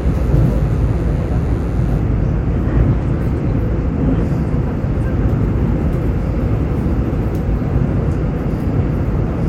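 From 0.0 to 2.0 s, DECT cordless phone buzz sits under the sound. A nearby cordless handset or base transmits a radio burst every 10 ms. The audio circuit rectifies it. The result is a thin, steady 100 Hz buzz with many harmonics, well below the signal.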